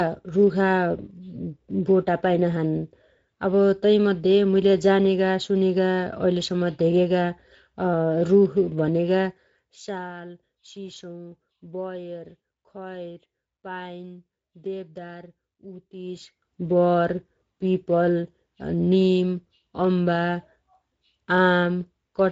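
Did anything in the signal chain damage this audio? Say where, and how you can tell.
Yes, in two places. The first is in the analogue wiring or power. A steady USB whine sits at 8 kHz right through the speech, about 20 dB under the signal. That fixed pitch matches the 125-microsecond microframe rate of a high-speed USB bus, so current drawn by the bus in those bursts is getting into the ground or supply rail and riding along with the audio.

The second is at the codec stage, where Speex compression has left its mark. The damage is plainly audible throughout. The speech has that grainy, hoarse CELP texture you get when the excitation is starved of bits, and nothing at all comes through above 7.6 kHz. That points to a wideband Speex mode at a fairly modest quality setting, around 16.8 kbps.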